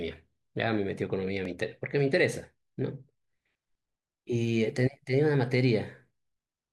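At 1.45 s the speech jumps, likely a dropped buffer (overrun) that overwrote a millisecond or two before it was read.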